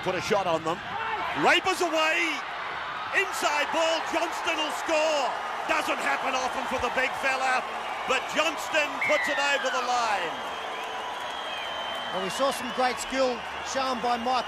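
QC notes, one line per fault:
No faults found on this pass; nothing to log.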